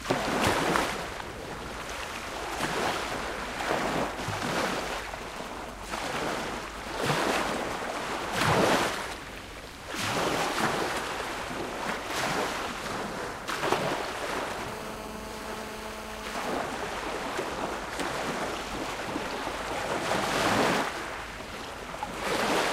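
A clip of everyday sounds with two kinds of radio interference from a nearby 2G phone. From 4.51 to 7.11 s there are GSM signalling bursts: a galloping dit-dit-dit of brief 217 Hz buzzes, roughly 10 dB below the wanted sound. The phone is sending short groups of bursts while signalling, and the audio circuit rectifies them. Unlike a call buzz, it arrives in clumps with gaps. From 14.68 to 16.57 s the GSM phone buzz appears as a hard, raspy, harmonic-rich tone at 217 Hz, about 11 dB below the signal. Here the phone is on a call and transmits its bursts continuously at 217 per second, so the rectified pulses form an unbroken buzz. That steadiness, not its pitch, separates it from the earlier signalling pattern.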